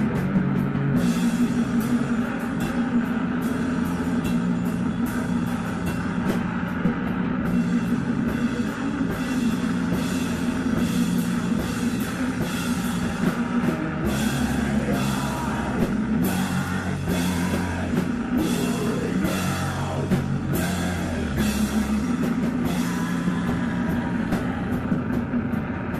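Nothing stood out as a technical problem on listening.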